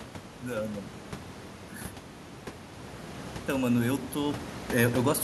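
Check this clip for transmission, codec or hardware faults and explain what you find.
One fault is audible in this speech clip: automatic gain rising. From 3.5 s to 4.43 s, the level climbs by about 3 dB. The automatic gain control judged the input too quiet and pushed its gain up gradually. It does not jump at once. The change is applied to everything reaching the microphone. So the voice and the room noise, sitting about 10 dB below speech, swell together. The result is a slow, even lift in loudness over roughly a second.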